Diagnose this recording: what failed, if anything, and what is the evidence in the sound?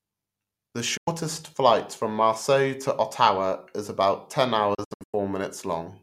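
The digital broadcast receiver lost lock or rejected corrupted frames, producing a digital broadcast dropout in this speech. At 0.97 s the sound fades out within about 8 ms and is silent until 1.08 s, a 96 ms gap that fits roughly three lost frames. From 4.74 to 5.14 s several short holes, the longest 96 ms, remove about 256 ms in all. The receiver muted until valid frames returned, so that audio is lost.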